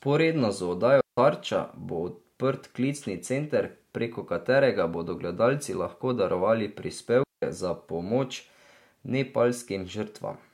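A digital wireless link lost too much data and its receiver muted, twice: a digital wireless dropout leaves clean near-silent holes in the speech at 1.01–1.18 s (170 ms) and 7.23–7.43 s (190 ms), with no noise burst either side.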